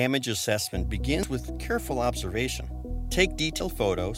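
Damaged data in a compressed stream shows up at 1.23 s and 3.60 s as two very brief blips in the audio. At each point the decoder meets corrupted bytes, misreads the affected frame, loses sync and scans forward for the next valid frame header.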